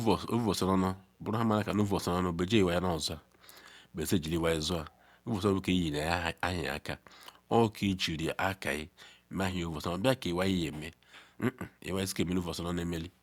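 A speech recording with mains buzz running from start to finish. It is a steady, raspy tone built on 60 Hz with harmonics stretching up into the kilohertz range, sitting roughly 40 dB below the speech, consistent with switching spikes from a dimmer, rectifier or unshielded cable entering the signal path.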